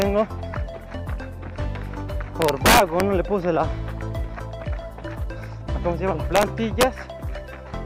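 Integer overflow breaks up this audio at four points. The first is a single crack at 0.02 s, where the level barely reaches the limit. The worst stretch runs from 2.42 to 3.00 s, driven about 2 dB past full scale. Shorter bursts follow at 6.36 to 6.43 s and 6.81 to 6.83 s, each about 1 dB over. Peaks exceeding the largest integer wrap to the opposite sign instead of being held. The result is violent cracks, far harsher than clipping.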